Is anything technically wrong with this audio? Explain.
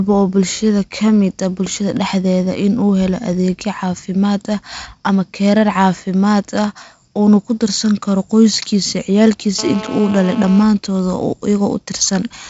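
Yes. From 9.59 to 10.63 s, a nearby 2G handset in a call pulses its transmitter 217 times a second, and the audio circuitry rectifies those radio bursts. The result is GSM phone buzz: a steady, raspy 217 Hz drone rich in harmonics, about 13 dB below the speech.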